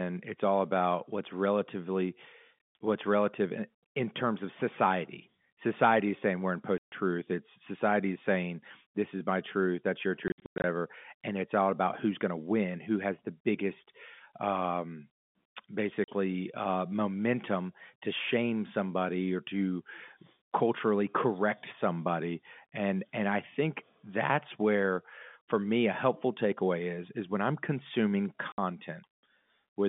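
Packet loss filled with silence cuts holes in the speech at 6.78 s (140 ms), across 10.28 to 10.64 s (240 ms lost in scattered gaps, the longest 100 ms), at 16.04 s (40 ms) and at 28.52 s (60 ms). Lost packets were replaced with digital silence, so each gap starts and ends abruptly. The gap lengths are multiples of 20 ms, which fits 20 ms packets on this G.711 telephone line.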